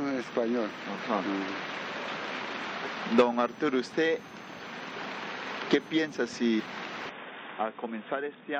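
A brief glitch from 6.58 to 6.61 s is damaged data in the compressed stream: corrupted bytes there made the decoder misread frames, lose sync and hunt for the next valid frame header before playback resumed.

From 7.09 s to the end, the sound abruptly turns duller and boxier, with nothing above 3.7 kHz, a few decibels quieter, and a new faint background noise, with no gap at the change. The likely cause is the input switching to a poorer device with a narrower band.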